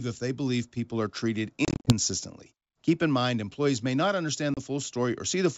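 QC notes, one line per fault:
1.65–1.93 s, packet loss on an ADPCM call: about 160 ms dropped in short silent holes across 220 ms, the longest 40 ms. The decoder's predictor loses sync, so the G.722 speech returns slightly distorted.
4.54–4.59 s, packet loss on an ADPCM call: one hard 30 ms gap, about three packets' worth, then slightly distorted speech while the ADPCM state resettles.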